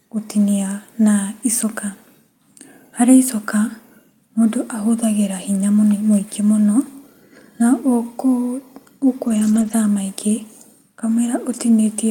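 From 9.27 to 9.73 s the speech turns rougher and noisier without dropping out: a lost packet rebuilt from error correction. Several lost packets were replaced by low-bitrate copies carried in the following packets. This differs from plain loss concealment, which leaves smeared, repeated-sounding fill.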